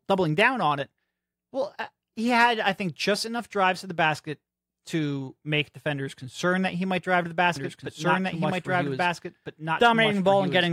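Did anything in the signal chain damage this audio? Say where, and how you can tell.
Yes. From 7.56 s, right after "might drive to the", a doubled audio track appears and runs to the end of the clip. A second full-band copy of the speech trails the original by roughly a second and a half at about the same level, with no decay or room colour, and it starts abruptly. That points to the editing or storage stage, likely an edit that left two copies of the track out of alignment.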